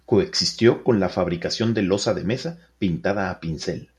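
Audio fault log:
No faults were found in this speech clip. Nothing heard in it calls for an entry in the log.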